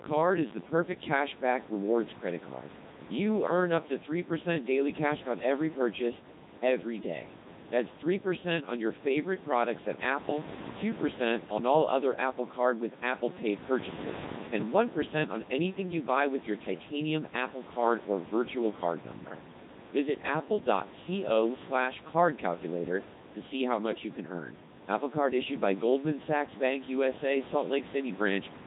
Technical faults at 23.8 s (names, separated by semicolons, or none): Codec 2 vocoder